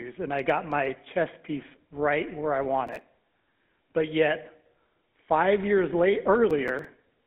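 From start to finish the speech carries GSM full-rate codec damage: a buzzy, gravelly roughness and a line band running from about 200 Hz to 3.5 kHz. That comes from the vocal-tract model's pulse-driven excitation, and the sound fits a 13 kbps GSM stream.

Right after "piece right where I", from 2.87 to 3.01 s, and again after "five years late", from 6.50 to 6.85 s, there's processor overload crackle, a gritty tearing burst. The processor kept missing its deadlines, which points to buffers of around 5 ms. Each missed buffer was skipped outright, leaving a run of hard-edged gaps.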